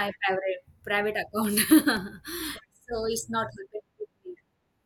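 Between 1.45 and 2.23 s, four short regular ticks, the longest only about 2 milliseconds, cut through the speech: CD scratch ticks, where the player patched unreadable data on each revolution.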